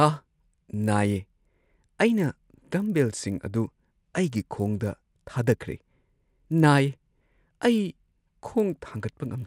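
Throughout the speech, the resampler restarted on every block. The conversion points to 24 kHz up to 48 kHz. Each 20 ms block was treated alone, so every edge carries a small error. This gives a 50 Hz buzz that is heard only while sound is present.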